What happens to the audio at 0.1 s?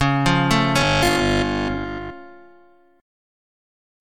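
Nothing goes wrong at 0.1 s; the audio plays through that moment intact, with no dropout, click or other fault.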